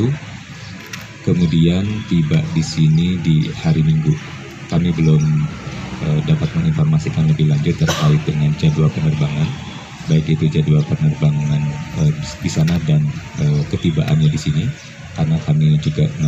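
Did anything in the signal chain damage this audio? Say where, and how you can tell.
Yes. From 1.61 to 8.63 s, crude rate conversion at the sample-format stage leaves a faint gritty fizz riding on louder, brighter sound. A 32 kHz to 48 kHz linear-interpolation upsample left unfiltered images about 40 dB down. On a spectrogram these appear as inharmonic mirror traces above 16 kHz.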